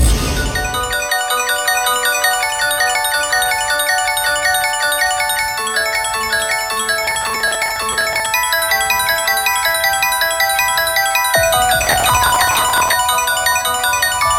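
Processor overload crackle tears through the sound from 7.07 to 8.26 s, and more densely from 11.81 to 12.93 s. The processor repeatedly missed deadlines for very short buffers, around a millisecond or two, and each miss skipped audio. The waveform shows clusters of tiny hard-edged breaks, and the spectrogram shows dense broadband vertical specks.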